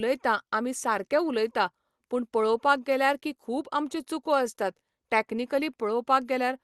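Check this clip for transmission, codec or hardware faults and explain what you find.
Nothing stood out on listening to the speech, which comes through the Opus call path without any audible problem.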